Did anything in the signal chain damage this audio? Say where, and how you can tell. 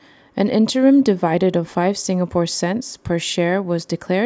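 No, nothing along the chain has left a mark on this speech recording that I can hear, so there's no stage to point at here.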